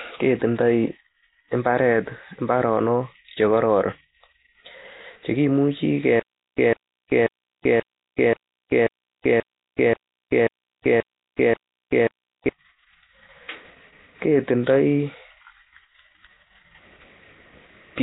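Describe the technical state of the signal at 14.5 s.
At 14.5 s the speech carries the same damage heard through the whole clip: heavy codec degradation that points to Nellymoser compression, which is likely the cause. The coder spends a small, fixed bit budget on short blocks and fills bands it cannot afford with noise. The speech therefore has a rough, hissy halo and a smeared, underwater character. On a spectrogram, nothing appears above about 3.9 kHz, and noisy, blotchy patches replace clean harmonics below that line. The bitrate fits about 16 kbps.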